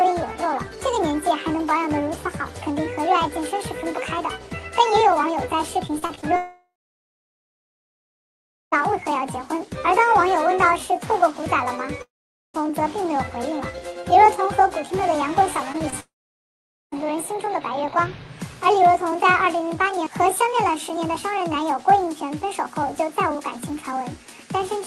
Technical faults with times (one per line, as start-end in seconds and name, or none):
5.87-6.24 repeated packet loss (robotic sound)
6.36-8.74 long network dropout
12.02-12.56 long network dropout
15.72-15.94 repeated packet loss (robotic sound)
16.00-16.94 long network dropout